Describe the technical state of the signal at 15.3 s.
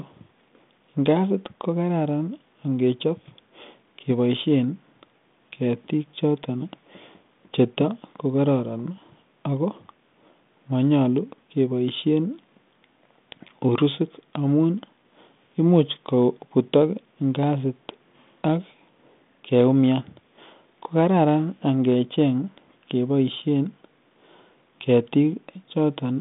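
At 15.3 s the audio is intact, with no fault audible; the speech comes through the telephone channel as expected for G.726 ADPCM at 32 kbit/s, band-limited to roughly 150 Hz to 3.6 kHz with only light codec coloration.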